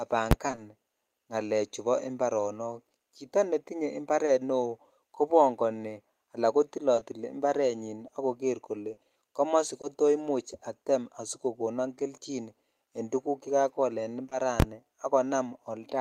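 At 0.31 to 0.33 s there is invalid numbers at full scale. A calculation produced infinite or invalid values that were pinned to the maximum sample value for one processing block of about 11.6 ms, which fits a 512-sample block. Because the block is this short, it is heard as a single hard bang. On a waveform it shows as a flat slab far beyond the speech peaks, and on a spectrogram as a bright full-height vertical stripe.

From 0.47 to 0.59 s comes repeated packet loss with a robotic sound. Three gaps, the longest 20 ms, left 60 ms missing. Each gap was patched by extending the previous sound, so half of this short span is synthetic. It sounds choppy. A spectrogram shows repeated smeared, overly regular harmonic patches, and the waveform shows cloned cycles.

At 4.25 to 4.29 s a short concealed packet loss fills a 20 ms hole by continuing the last sound before it blends back into the real audio. 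It is heard as a brief smear or wobble. A spectrogram shows a small blurred patch where fine detail is lost.

Between "kobongoni ala" at 6.95 s and "to imuch atem asikokonon" at 9.85 s there are scattered short gaps. Around five separate losses total 120 ms, the longest roughly 40 ms. Each was patched by extending the preceding sound, so the audio stays clear but with occasional hiccups. A spectrogram shows isolated small smears spread across the stretch.

Two further short concealed packet losses follow back to back at 14.25 and 14.29 s. Each fills 20 ms, so together they make one smear of about 40 ms.

At 14.60 to 14.62 s the invalid numbers at full scale return for a longer block of about 23 ms, which fits a 1024-sample block. It is again a loud bang, and it appears as a flat rectangle far beyond the speech peaks on the waveform with a broadband stripe on the spectrogram.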